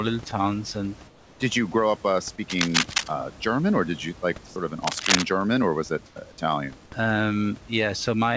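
Speech, carried over a call link whose audio stops at 8 kHz, which fits a wideband codec such as G.722. In the pauses at 1.08 to 1.40 s, 4.46 to 4.56 s and 6.06 to 6.16 s, the room's background gives way to comfort noise in place of the background: a steady, featureless hiss about 4, 6 and 3 dB quieter than the real room sound, which sits some 20 to 28 dB below the loud parts. The likely cause is discontinuous transmission, with the receiver synthesising noise while the sender is silent. Unlike a dropout, the sound never goes dead; only its texture and level change. At 2.50 to 3.10 s and again at 4.84 to 5.24 s, cable scratch noise appears: dense, uneven scratching bursts roughly as loud as the speech itself, likely from a worn cable or connector being moved. It differs from clipping crackle because it follows no peaks in the speech and arrives as a rustling patch lasting up to 0.6 s.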